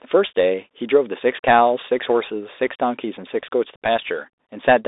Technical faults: Bluetooth CVSD headset codec; unconcealed Bluetooth headset packet loss

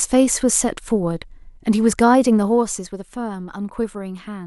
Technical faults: zipper noise

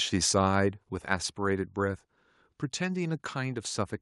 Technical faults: microphone volume stepped down

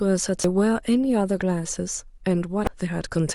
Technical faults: damaged data in a compressed stream

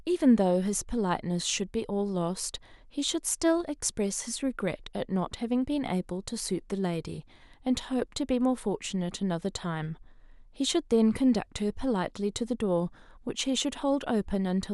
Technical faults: none

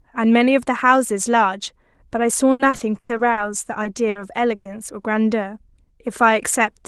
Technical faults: repeated packet loss (robotic sound); short concealed packet loss; burst of packet loss

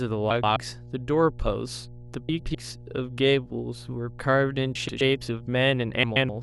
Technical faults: mains hum; frames out of order

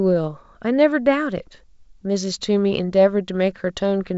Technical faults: none

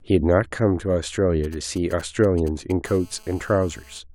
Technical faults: GSM signalling bursts; GSM phone buzz

